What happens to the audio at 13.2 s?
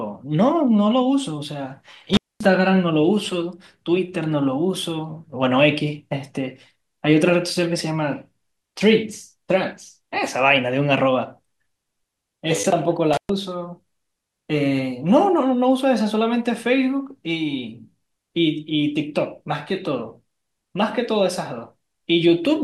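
An intermittent contact interrupts the speech from 13.13 to 13.30 s: a loose cable or plug briefly opens the signal path for about 120 ms, so the sound drops out abruptly with crackle at each edge and faint hiss in the gap.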